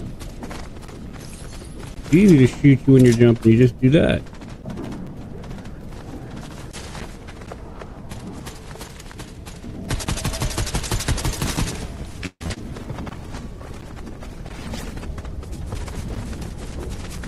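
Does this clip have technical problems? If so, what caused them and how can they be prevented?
Yes. From 12.26 to 12.57 s the sound turns choppy and robotic. This is repeated packet loss: four gaps in about 0.3 s, the longest 142 ms. The receiver patched 200 ms by stretching the last sound, and 40 ms simply drops out, so roughly two thirds of that stretch is filler. A more stable network path, a larger jitter buffer or forward error correction would prevent it.

From 12.79 to 15.43 s the audio goes rough, watery and dull. This is a call bitrate drop: the sender's bandwidth estimate fell, and the encoder went from 48 to 18 kbps and stayed at that lower rate for about 2.6 s. Coding that coarsely smears the detail and trims away the upper frequencies until the rate climbs back. More reliable uplink bandwidth, or fewer competing uploads, would prevent it.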